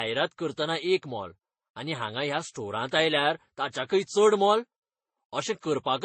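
Transcoding between lossy codecs, throughout: swirly, smeared artefacts from several low-bitrate codecs pile up, and nothing above 8.3 kHz remains, likely from repeated re-encoding.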